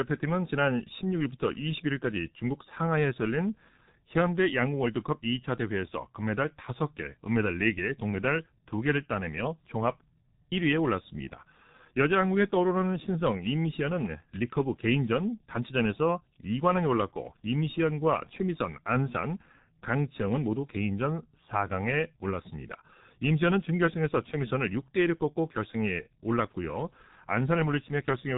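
G.723.1 codec damage runs through the whole speech clip, from start to finish. Nothing reaches above 3.8 kHz, so the sound is boxed into a narrow telephone band and comes across as muffled. The damage is heavy: the speech model is refreshed only every 30 ms frame, so quick consonants smear together and vowels take on a rough, hoarse edge. This fits very low-rate coding at around 6 kbit/s.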